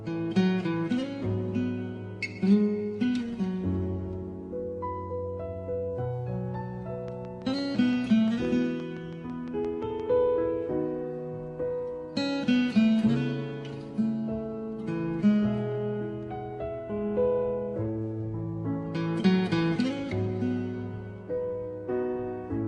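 From 7.08 s to 10.01 s, a train of clicks sits over the sound. Sharp pulses arrive about 5.8 times a second, evenly spaced, around twenty in all. Each has much the same shape. They peak a few decibels above the surrounding audio. The result is a steady ticking that runs through the pauses too. Some outside source was injecting a repeating pulse, likely interference from nearby equipment or a faulty connection or power supply.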